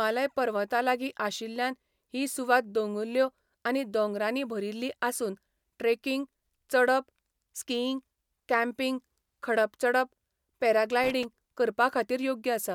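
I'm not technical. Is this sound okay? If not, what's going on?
No, there's a short burst of loose connector crackle around 11.04 to 11.25 s, where a worn or dirty plug contact briefly cuts in and out, scratching the speech.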